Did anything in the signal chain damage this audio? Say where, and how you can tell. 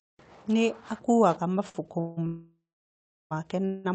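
Yes, the damage happened at the network and jitter-buffer stage of the call. At 1.69 to 1.77 s there is a short stall from a late packet: the receiver ran out of audio and stretched the last sound by about 52 ms until the packet came in, then carried on from the same point. On a spectrogram the harmonics run flat and smeared across that span. In the waveform, one cycle pattern repeats with a slight dip, and nothing is cut out.

Three call audio freezes follow, at 2.00 to 2.19 s, 2.27 to 3.33 s and 3.65 to 3.87 s. Each time the sound holds as a fading buzz. In the middle one the buzz dies to silence for about 0.73 s of its roughly 1.04 s length. Delivery likely stalled in the network, emptying the buffer. On a spectrogram these look like horizontal, decaying streaks, and in the middle one then a blank band. The waveform shows a shrinking repetitive tail before the sound resumes unbroken, with added delay rather than lost material.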